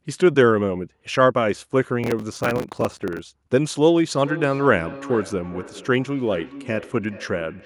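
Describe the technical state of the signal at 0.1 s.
The speech at 0.1 s is intact, with no dropout, clipping, distortion or other technical fault audible at that moment.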